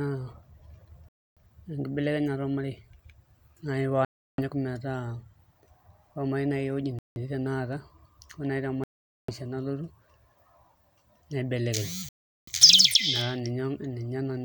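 Speech with five dropouts where the sound cuts to silence and resumes, at 1.09, 4.05, 6.99, 8.84 and 12.09 s, lasting roughly 0.17 to 0.45 s, likely Bluetooth stalls from interference draining the playback buffer.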